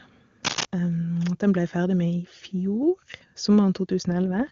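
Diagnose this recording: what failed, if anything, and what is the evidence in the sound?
From 0.44 to 0.65 s, dense uneven scratching sits about level with the speech. This is cable scratch noise in the analogue wiring, likely from a worn connector moving.

From 4.11 s to the end, the speech turns rough and synthetic with no gap. This is an AMR rate drop, fitting a codec step from 23.85 to 8.85 kbit/s.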